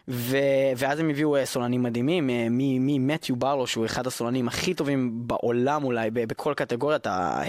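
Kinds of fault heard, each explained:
No faults heard.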